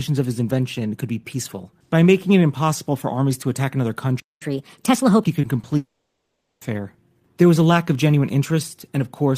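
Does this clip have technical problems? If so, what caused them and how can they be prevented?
Yes. At 4.20 s the speech cuts out for about 0.21 s, a playback stall, likely from the player running its buffer dry or its audio thread getting blocked, then resumes where it left off. A larger playback buffer and a real-time-priority audio thread would prevent it.

Right after, from 4.42 to 5.28 s, there's catch-up at higher speed: the player resamples its backlog at 1.25x, so the speech runs fast and sits around four semitones sharp before settling back to normal. Time-stretching that keeps pitch, or just dropping the backlog, would prevent it.

Then come two short concealed packet losses, at 5.41 to 5.45 s and 5.61 to 5.65 s, each a brief smear where the receiver extends the last sound over roughly 20 ms of missing audio. Jitter buffering and forward error correction would prevent them.

From 5.77 to 6.63 s there's a long network dropout: the last sound carries on and fades, then there's silence, and the speech comes back further along with that stretch gone, likely because packets stopped arriving altogether. 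A steadier network path and redundant packet transmission would prevent it.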